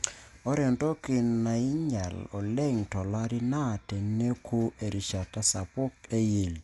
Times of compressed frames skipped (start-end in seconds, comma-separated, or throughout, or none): none